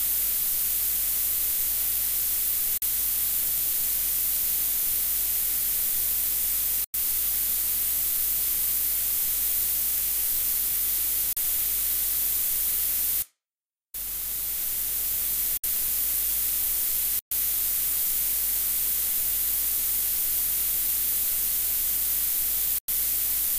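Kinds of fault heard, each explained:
Bluetooth stall: the sound drops to dead silence for between 38 and 123 ms at 2.78, 6.84, 11.33, 15.57, 17.19 and 22.78 s, then carries on. That's likely the headphones' buffer running dry while interference held up packets until resends arrived.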